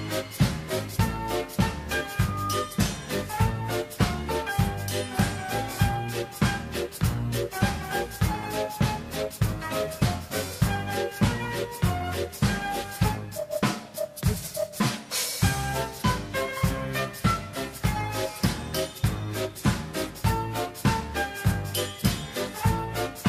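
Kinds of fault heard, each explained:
Loudspeaker feedback squeal: a microphone was picking up the loudspeaker it was driving, and at one frequency the round trip through the loop gained more than it lost, so that frequency fed on itself. The result here is a single 1.2 kHz tone that swells out of the audio over roughly 0.4 s, from about 2.09 s, reaches about the same level as the wanted sound, and is gone by 2.82 s.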